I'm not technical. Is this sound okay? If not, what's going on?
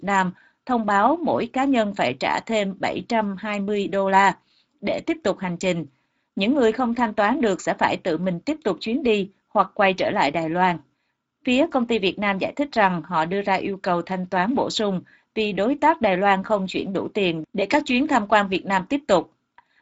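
No. The whole recording, from start to finish, carries Speex codec damage. Speex is an older way of squeezing speech down for internet calls and game chat. Here it was set to save space, and it shows clearly. The speech sounds rough, hoarse and noisy, like an old voice chat. Nothing above about 7.6 kHz gets through, so the crisp top edge of the sound is missing.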